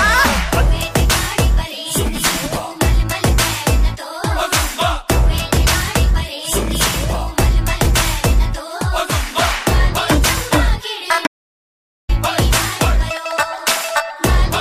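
The input feed was most likely lost for a moment while the recorder kept writing silence, giving an audio dropout to silence from 11.27 to 12.09 s. The sound cuts off abruptly, leaves about 0.82 s of dead silence with no room tone, then snaps back mid-flow.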